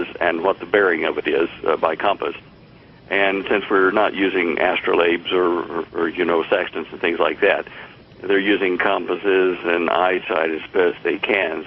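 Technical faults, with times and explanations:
8.67–11.66 s, time-stretched section: from here to the end the pace abruptly slows to 0.74 times normal while the pitch holds steady, leaving the audio dragging. This is likely software lengthening the passage by repeating short slices of sound instead of resampling it.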